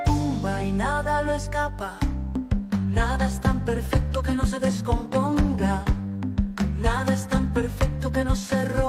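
Nothing stood out on listening to the audio.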